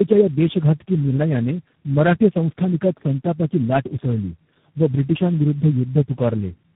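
Rough, muffled, warbly speech runs through the whole clip, with nothing above about 3.8 kHz: tandem speech coding. The sound suggests several low-rate speech codecs in a row, likely G.723.1, G.729A and G.726, each re-encoding the previous one's degraded output, so the artefacts stack up.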